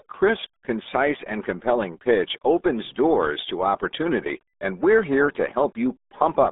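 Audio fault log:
Throughout: RealAudio 14.4 codec. The speech sits in a 250 Hz to 3.6 kHz band with nothing above 3.7 kHz, and heavy gargly smearing churns through it, which fits an 8 kbit/s RealAudio 1 coder. A plain telephone filter would narrow the sound without this bubbling damage.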